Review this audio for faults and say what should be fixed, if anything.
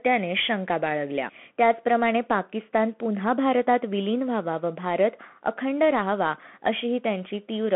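The call audio went through a Bluetooth CVSD headset codec for the whole clip, the narrowband headset link that codes each sample as a single up-or-down bit with an adapting step size, which fits a 64 kbps stream. The speech is confined to roughly 150 Hz to 3.4 kHz, with nothing above 3.8 kHz. Loud, bright moments outrun the step and distort, s sounds come out scratchy, and a granular hiss sits under the speech throughout. To prevent it, route the headset over a wideband link (mSBC or LC3) or record from a wired or local microphone instead.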